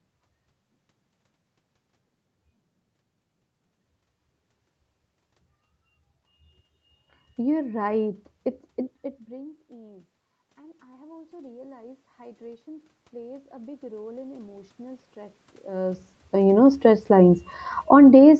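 Speech recorded through a call's microphone path, with nothing above 8 kHz, and the trouble is the gain control chasing the level. Around 9 s the talker drops away from the mic, the input falls by about 24 dB, and from 9.02 to 17.49 s you hear automatic gain rising: a slow climb of about 16 dB that brings up the voice and the room noise together, so the background swells along with the speech instead of staying put. Since that recovery drags on for over eight seconds, the voice sits noticeably low for a good stretch, and even then the climb wins back only part of the lost level. The talker shifts again around 15.5 s, which probably feeds into the end of that climb. Then, right at the close, from 17.77 to 18.14 s, there's a quick bit of automatic gain falling, about 4 dB down. The control turns its gain back down, so the sound sinks in level, room noise included, in well under half a second.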